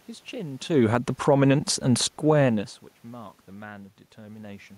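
From 0.79 to 2.93 s, automatic gain falling pulls the level down by about 5 dB. The control judged the input too loud or its background noise too strong, so speech and room noise sink together. Inside that span, from 1.41 to 1.89 s, automatic gain rising briefly lifts everything by about 3 dB. Speech and background swell as one, which sets it apart from the talker moving around 0.5 and 2.5 s.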